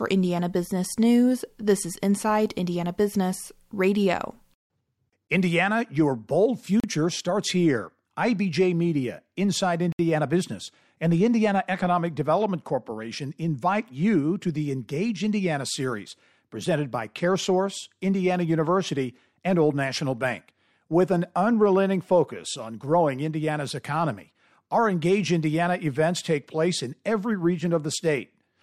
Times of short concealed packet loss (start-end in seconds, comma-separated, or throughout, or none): none